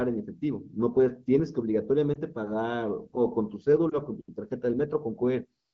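At 2.14 to 2.18 s and again at 3.89 to 3.97 s, the speech briefly dips and warbles: lost AMR speech frames, each a single 20 ms frame. The decoder reused the previous frame's pitch and vocal tract settings at reduced gain to conceal the missing data.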